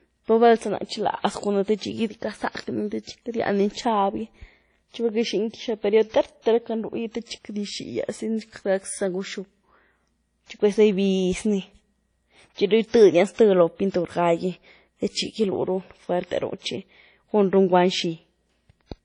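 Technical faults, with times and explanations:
Throughout: low-bitrate audio saved at a high bitrate. The speech has nothing above 10.1 kHz, with the smeared, swirly artefacts of a heavily compressed source. This is likely a low-bitrate WMA encode later re-saved as high-bitrate MP3, which cannot restore the discarded detail.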